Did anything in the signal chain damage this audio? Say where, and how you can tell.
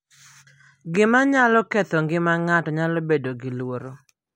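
No, no chain damage audible.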